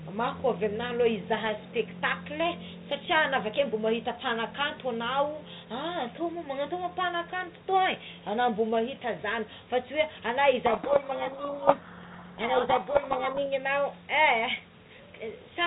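A codec payload misread runs from 10.66 to 13.47 s. The decoder unpacks each G.726 code word with its bits in the wrong order, so it rebuilds the wrong sample differences, and the speech sinks under harsh, grinding distortion until correctly packed words return.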